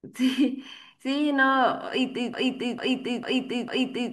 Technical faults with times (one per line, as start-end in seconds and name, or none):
2.34-4.12 broken-record loop